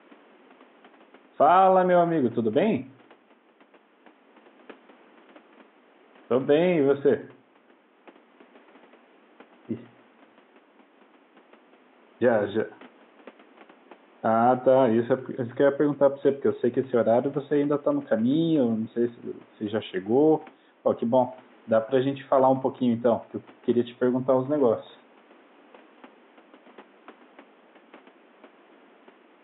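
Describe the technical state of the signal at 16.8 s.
At 16.8 s the speech signal is intact, with only the room's own background noise sitting about 32 dB beneath it.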